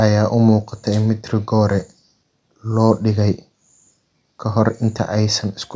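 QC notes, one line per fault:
No faults heard in this speech recording.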